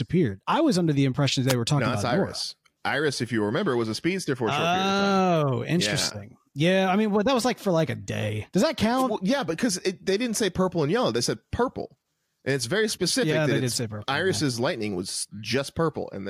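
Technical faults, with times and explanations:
1.48–1.54 s and 8.97–9.04 s, wireless microphone noise hit: the analogue FM radio link fades as reflected signals cancel at the receiver, letting receiver noise surge up, so each time a burst of static about 70 ms long is heard.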